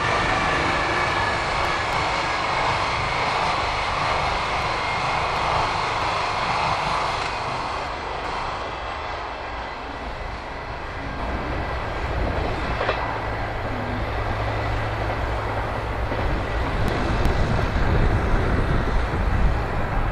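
From the start of the audio until 11.19 s there is a channel delay (doubling): one channel runs about 40 ms behind the other, and when the two are summed to mono the late copy sits right behind the original at equal level. Rather than blending, it reads as a close slap or a thickened, doubled image on every onset. At 11.19 s the lag disappears and the sound collapses back to a single image.

Within that stretch, frames out of order first appear from 1.37 to 1.93 s. Two adjacent blocks of about 0.28 s each were decoded in swapped sequence, which fits three frames per block. The passage plays with its halves exchanged, producing a jumbled flutter. No time is lost overall. The same fault recurs with longer blocks of about 0.37 s each, consistent with four frames per block, at 4.62 to 5.37 s, 6.02 to 6.76 s, 7.87 to 8.62 s, and, after the doubling has ended, 16.88 to 17.63 s.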